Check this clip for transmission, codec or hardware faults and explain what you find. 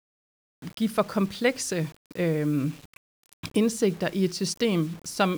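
One fault runs through the whole speech clip: low bit depth without dither.

Throughout, the audio was likely requantised to very few levels, a grain consistent with about 7 bits, by rounding with no dither. The error tracks the signal, so quiet passages turn gritty and grainy, with distortion noise sitting roughly 25 dB below the speech.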